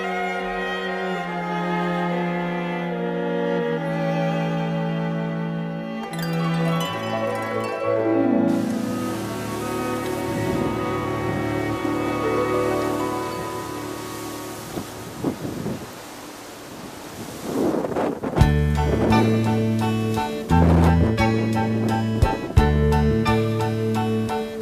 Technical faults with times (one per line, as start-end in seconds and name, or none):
none